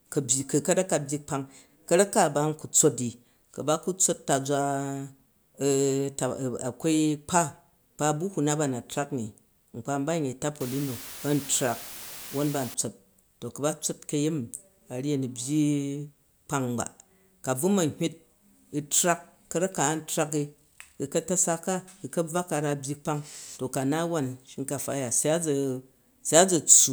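Speech, with a stretch of low bit depth with dither from 10.61 to 12.74 s, where the audio is rounded to just 7 bits after dither is added. The rounding error becomes a steady, even hiss, only about 15 dB below the speech, with no harsh distortion. On a spectrogram that span shows a flat, uniform noise floor across the whole band; the waveform's quiet gaps fill with a thick, fuzzy band of noise.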